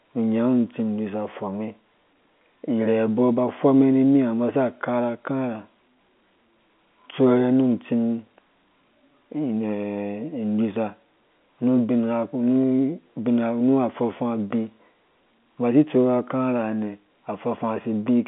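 No technical faults are audible.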